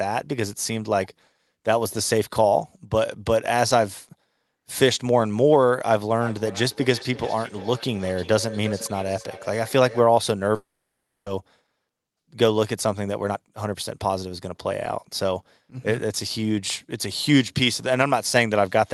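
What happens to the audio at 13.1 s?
At 13.1 s the speech is in a jitter buffer speed-up, running from 13.00 to 15.43 s. The receiver trims short pitch-period pieces again and again, shedding about a third of a second. Speech plays at 112% speed, same pitch, sounding hurried.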